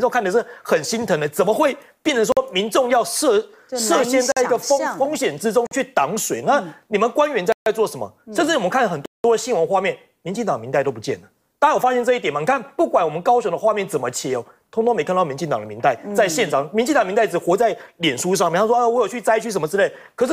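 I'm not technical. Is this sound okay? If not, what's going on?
No. The sound drops out completely five times: short holes at 2.32, 4.32 and 5.67 seconds (each about 0.05 seconds long), then longer ones from 7.52 to 7.66 and 9.06 to 9.24 seconds. Each is a block of digital silence: most likely the playback program didn't deliver the next chunk of sound in time, so that stretch was filled with nothing.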